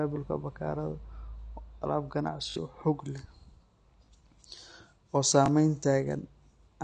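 Speech runs through the whole clip with a dull, smeared quality, a watery warble on sustained vowels and fizzy sibilants. The cause is likely AAC compression at a low bitrate, around 32 kbps. The codec has discarded all content above 10.2 kHz and thinned the bands it kept. On a spectrogram this shows as a flat, hard ceiling at 10.2 kHz, with patchy holes and blurred, mottled energy in the upper bands instead of clean harmonic lines.

A repeated buffer interrupts the speech three times. From 2.50 to 2.56 s, the same 20 ms piece of audio plays three extra times in a row. This produces a short buzzy stutter, and about 70 ms of sound goes missing. Shorter single repeats of a 20 ms piece follow at 4.06 to 4.08 s and 5.46 to 5.48 s, each heard as a click-like hiccup. In the waveform, identical 20 ms blocks sit back to back with abrupt joins. On the spectrogram, each join appears as a thin vertical broadband line.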